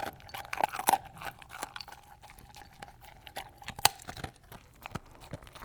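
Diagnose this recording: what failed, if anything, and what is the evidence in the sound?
Frames out of order in the network path: at 0.40–0.66, 2.61–2.87 and 4.05–4.18 s, neighbouring blocks play swapped, giving a garbled flutter.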